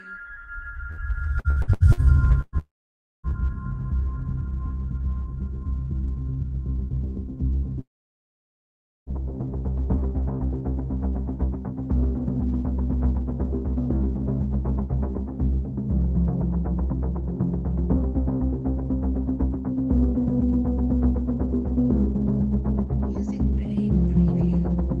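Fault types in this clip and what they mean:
Burst of packet loss: A short run of audio never arrived in time, so the receiver stretched the last bit of sound and faded it before jumping ahead. You hear it at 0.91 s and 7.57 s, each a smeared patch of about 60 ms, and at 2.41 to 2.55 s, where roughly 120 ms goes missing and the fill dies into about 40 ms of silence just before the longer gap.
Repeated packet loss (robotic sound): From 1.39 to 2.07 s the losses keep coming: five holes, the longest about 70 ms, each patched with continued sound before the next one hits. Nearly half that stretch is filler rather than real audio, about 300 ms lost in all, so it comes out choppy and mechanical, with chunks missing between the patched bits.
Long network dropout: Two long stretches where nothing got through. From 2.58 to 3.26 s about 660 ms is gone, and after a brief fading fill it's roughly 580 ms of silence. 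From 7.81 to 9.09 s it's worse, about 1.26 s missing with around 1.22 s of dead air. The audio then resumes further on with that part skipped, likely a network dropout.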